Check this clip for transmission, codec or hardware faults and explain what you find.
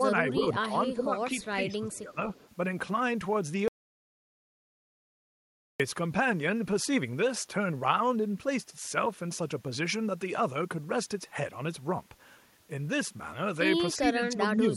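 Three kinds of fault are present: speech suppressed in double talk, a faint echo leak, and one audio dropout to silence.

Speech suppressed in double talk occurs at 0.37–0.58 s, 0.91–1.1 s, 1.55–2.2 s and 13.99–14.71 s. The speech level dips, by about 5 dB in the first stretch and about 10 dB in the others, for roughly a tenth to half a second at a time. The likely cause is an echo canceller on the talker's own side that could not separate the local talker from loudspeaker echo while both sides spoke, so it attenuated everything.

Echo leak appears at 1.92–1.96 s and 2.34–2.49 s. These are brief scraps of a delayed copy of the speech, trailing the original by 350 ms and sitting about 30 dB below it, so they are faint and fragmentary. The likely cause is a loudspeaker endpoint whose echo canceller did not fully remove what its microphone picked up, letting a residue travel back down the line.

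An audio dropout to silence runs from 3.68 s to 5.80 s, about 2.1 s in total. The sound cuts off abruptly and the gap is silent, with no room tone at all, before the audio resumes mid-flow. Anything spoken in that span is lost. The likely cause is an interruption of the input, such as a device disconnect, a link failure or a momentary mute, during which the recorder kept writing silence.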